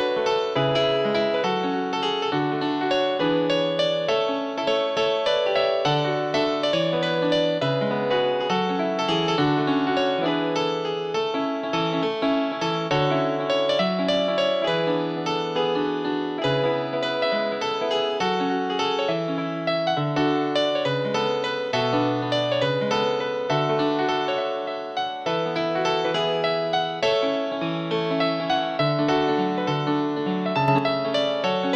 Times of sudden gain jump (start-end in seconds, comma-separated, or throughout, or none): 30.68-30.79